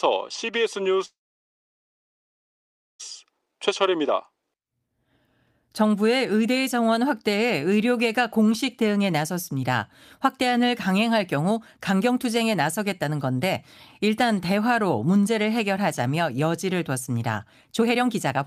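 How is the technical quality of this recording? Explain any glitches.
The recording has several timing glitches from network delay.

From 1.05 to 3.01 s the speech halts in a call audio freeze. The last sound carries on briefly as a fading buzz or hiss, then nearly 1.9 s of silence, and the speech resumes where it stopped with nothing lost. This likely comes from packets being held up until the jitter buffer ran empty, adding about 1.9 s of delay.

Jitter buffer speed-up follows at 3.24 to 3.47 s (116% speed, roughly 40 ms removed), 11.37 to 13.04 s (107%, roughly 100 ms), and 17.79 to 18.46 s (120%, roughly 150 ms). In each stretch the speech sounds hurried but keeps its pitch. The receiver was trimming short pitch-period slices to shed surplus buffered audio.

Jitter buffer slow-down runs from 3.51 to 3.91 s at 93% speed. Sounds are drawn out at an unchanged pitch. The receiver repeated single pitch periods, adding 36 ms to build up its reserve.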